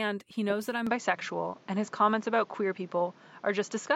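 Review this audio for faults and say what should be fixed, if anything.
At 0.87 s the speech turns duller and boxier with no gap, and from there to the end nothing passes above 7.6 kHz. The level shifts by roughly 5 dB and a new background noise appears about 30 dB below the speech. This is likely an input switched to a poorer device. A filter or codec bandwidth drop would narrow the band without also changing level and noise. Lock the recording input so the system cannot change devices mid-session.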